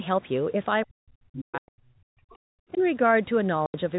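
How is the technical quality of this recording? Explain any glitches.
The recording has two kinds of glitch: stretches where the speech is pushed down, and short dropouts to dead silence.

Speech suppressed in double talk occurs from 0.88 to 2.38 s and again from 2.74 to 2.80 s. The level falls by roughly 40 dB in the first stretch and only about 5 dB in the brief second one. The likely cause is an echo canceller that could not tell this talker from loudspeaker echo while both sides spoke, so it turned the speech down.

Packet loss filled with silence cuts holes at 1.58 to 1.68 s (100 ms) and at 3.66 to 3.74 s (80 ms). Both lengths fit whole 20 ms packets. Missing audio was replaced with silence, so each gap starts and ends abruptly.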